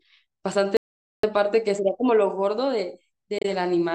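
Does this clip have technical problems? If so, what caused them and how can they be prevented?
Yes. An audio dropout to silence runs from 0.77 to 1.23 s. About 465 ms of speech is lost to silence, likely from a lost input link. Secure cables and monitor input levels during recording.

Damaged data in a compressed stream causes a brief disruption from 3.38 to 3.45 s. The decoder misreads corrupted frames and resyncs. Verify file integrity and use error-checked transfers.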